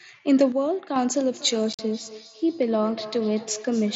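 A sudden gain jump runs from 0.52 to 0.96 s. The level drops by about 6 dB from one instant to the next, and the background noise drops with the speech, so the whole sound steps down together rather than fading. At 0.96 s it steps back up just as abruptly. The cause is likely a digital gain setting applied without any ramp, which is why both edges are hard.

A feedback echo between two devices starts at 1.34 s and continues to the end. The speech comes round again roughly every 200 ms, with the loudest repeats about 16 dB below the direct speech, thinner and more ringing than the original. This happens when a second device in the same room plays back what the first microphone sent, and that microphone picks it up again. Each echo canceller removes only its own playback, so the loop survives.

Unconcealed Bluetooth headset packet loss cuts into the speech from 1.73 to 1.79 s. About 52 ms of audio is missing within a 60 ms stretch, and the longest unbroken hole lasts 45 ms. 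That amount fits roughly seven lost headset frames. Nothing fills the gaps, so the speech breaks off and resumes with abrupt edges. The mSBC headset link is heard carrying speech up to 8 kHz with only light graininess.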